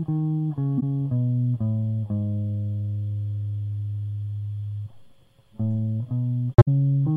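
Corrupt frame concealed at 0.77 to 0.83 s and again at 6.54 to 6.68 s: the decoder caught damaged AAC data and papered over it. The first event's length points to about two frames, the second to roughly seven.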